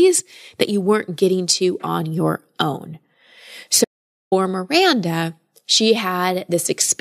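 Speech recording with an audio dropout to silence from 3.85 to 4.32 s. The sound stops abruptly and returns abruptly. The gap is silent, with no room tone. About 0.47 s of speech is gone. The likely cause is a lost input signal.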